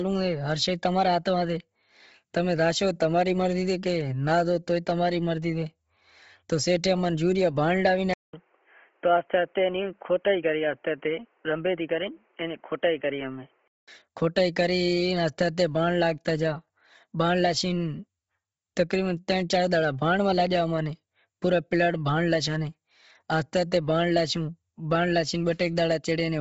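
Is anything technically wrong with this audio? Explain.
Yes. Throughout the speech there is a breathy, grainy edge on the voice, with nothing at all above about 7.8 kHz and heavy smearing where the upper spectrum should be. This is likely Bluetooth LC3 compression. The transform codec works in short frames, and here the sound fits 7.5 ms frames at around 24 kbps. At that rate it zeroes much of the high band and fills the gaps with synthetic noise, which produces the grainy, hissy texture.

From 8.13 s to 13.88 s the voice turns dull and boxy, cut off above about 3.2 kHz, and there is a silence of about 200 ms where it changes. The loudness stays about the same, but a new background noise comes in, roughly 40 dB under the speech. This is likely the input switched to a poorer device, such as a second microphone or a headset call profile, whose narrower band and own noise floor take over until the original input returns.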